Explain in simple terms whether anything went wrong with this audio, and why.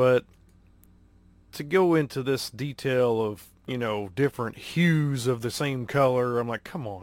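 Something did go wrong: there are clock slip clicks through nearly the whole clip, from 0.18 s to 6.92 s. You hear faint, regular ticks about six or seven times a second, roughly forty in all, clearest when the speech is loud. The likely cause is two pieces of gear running on separate, unsynced clocks drifting apart by around 150 parts per million, so a single sample gets dropped or doubled each time they slip.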